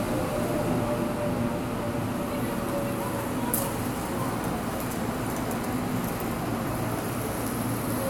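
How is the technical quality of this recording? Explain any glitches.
Nothing here stands out as a glitch; the recording sounds steady and intact throughout, with no audible technical trouble to explain.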